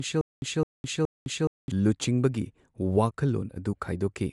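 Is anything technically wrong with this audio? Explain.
Yes, two faults are audible.

From the start to 1.72 s there is stutter with silent gaps, already under way as the clip opens. A 211 ms fragment of speech repeats three times, each followed by about 209 ms of digital silence, a steady 420 ms cycle. A stalled stream likely replayed its last buffer on each retry, so the speech meant for that stretch is lost. Identical repeats separate this from random dropouts.

Throughout the clip there is audible codec damage, likely from Bluetooth LC3 compression. Nothing sounds above 11.5 kHz, and the speech has a breathy, grainy edge where the upper band is filled with noise rather than real detail. The degradation fits 48 kbps with 10 ms frames. That grain separates it from a simple low-pass filter.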